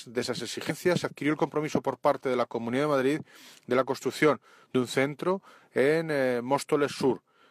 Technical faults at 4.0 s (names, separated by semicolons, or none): none